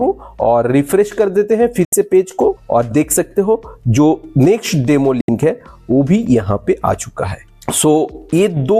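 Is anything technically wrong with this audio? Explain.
Yes, there are two digital broadcast dropouts, at 1.85 to 1.93 s and 5.21 to 5.29 s. Each time the receiver apparently lost valid frames and muted, so the sound snaps out with a 3 ms fade, leaving a hole of about 80 ms, roughly three lost frames' worth, before returning.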